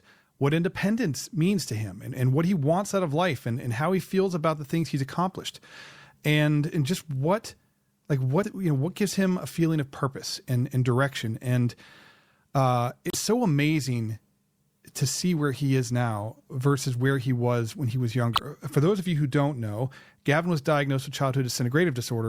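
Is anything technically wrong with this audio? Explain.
Yes. The speech contains damaged data in a compressed stream. Corrupted bytes make the decoder misread frames and lose sync while hunting for the next header, which produces a brief chirp or blip. This happens three times: at 8.40–8.45 s, right after "and just what like"; at 13.08–13.15 s, just before "so amazing"; and at 18.33–18.40 s, between "was when he was" and "for those of you".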